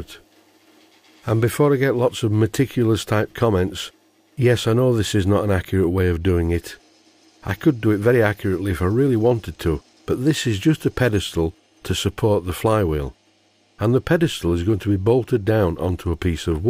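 No technical faults are audible.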